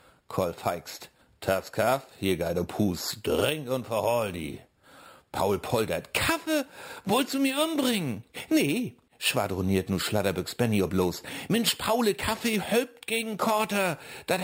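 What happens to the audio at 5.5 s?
At 5.5 s you're hearing imaging from sample-and-hold upsampling, and it's there for the whole clip, not just that moment. Each sample was simply repeated to raise the rate, with nothing smoothing it out, which fits an original rate of 12 kHz taken up to 48 kHz. Mirror copies of the spectrum land between 6 and 12 kHz at about 15 dB below the signal, giving a bright metallic fizz that tracks the level and slides opposite to the pitch.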